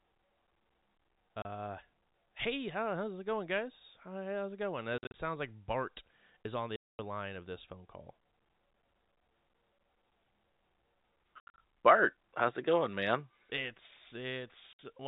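Speech over what sounds like a G.711 telephone path, with packet loss filled with silence: hard-edged dropouts at 1.42 s, 4.98–5.14 s, 6.76–6.99 s, 11.40–11.58 s and 14.73–14.79 s. The hole lengths fit 10 ms packets, and the 5 s and 11.4 s stretches are scattered bursts of gaps.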